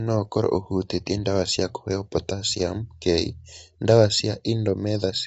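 Speech, with low-delay AAC compression audible throughout. The voice sounds rough and grainy, and nothing survives above 7.8 kHz. This is likely AAC-ELD at a low bitrate, around 24 kbps.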